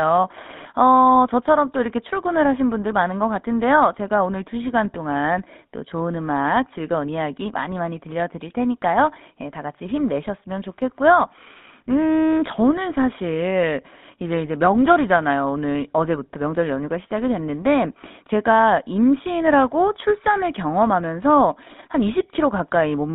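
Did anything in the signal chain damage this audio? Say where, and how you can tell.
Yes, at the codec stage: GSM full-rate coding throughout limits the speech to 150 Hz to 3.7 kHz, and its sparse pulse excitation leaves a plainly buzzy, gravelly roughness.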